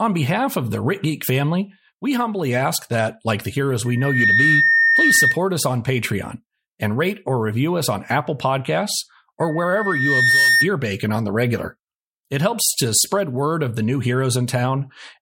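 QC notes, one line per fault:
3.85–5.39 s and 9.41–10.71 s, loudspeaker feedback squeal: the microphone picks up its own loudspeaker, and at 1.8 kHz the loop gain rises above one, so that single frequency keeps amplifying itself. After "that like the heroes" it swells to a piercing tone in under half a second and holds until "us on". The second one builds more slowly, over about a second, and stops before "bacon on the regular". Both times it sits a few dB above the speech.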